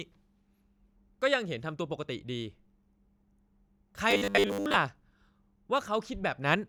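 Audio likely arrived too seldom from 4.11 to 4.77 s, so repeats fitting 10 ms buffers filled most gaps, giving robotic sound: a rigid 100 Hz buzz.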